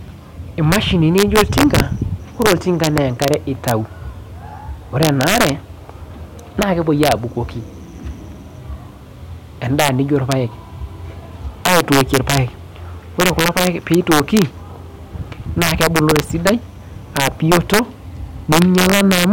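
Integer overflow runs through the whole of this speech clip. The signal was driven roughly 4 dB past full scale in fixed-point arithmetic, and instead of being limited, each sample over the ceiling wrapped to the opposite extreme of the range. Only around half a percent of samples cross that line, all on the loudest peaks, so the damage is intermittent: sharp, violent cracks on stressed moments, far harsher than ordinary clipping distortion.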